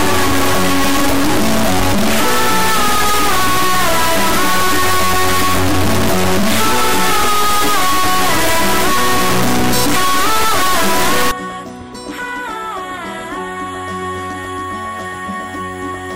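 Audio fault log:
0.00–11.31 s, integer read as float: 32-bit integer samples decoded as 32-bit float become near-zero or huge values, so output slams between silence and clipping as harsh square-wave buzz.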